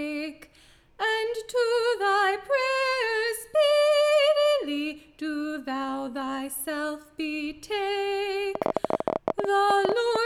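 From about 8.55 s to 10.17 s there's a train of clicks, roughly twenty of them at around 14.4 per second, unevenly spaced and sitting well above the sound. Likely interference or a faulty connection injecting pulses, heard as ragged ticking and popping.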